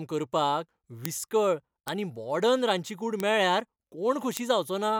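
A flipped bit in memory or on a digital link throws single samples by a power of two and back. This bit error spike gives sharp broadband ticks unrelated to the speech. They fall at 1.05 s before "विस्कळ आनी" (about -2 dBFS), at 1.88 s after "करपाक विस्कळ", at 3.20 s after "रांदची कूड", and at 4.37 s (three samples), each later one about -8 dBFS.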